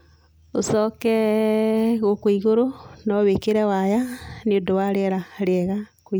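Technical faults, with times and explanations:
No technical fault can be heard anywhere in this speech recording, and the signal holds steady with no break or disturbance in its level or continuity.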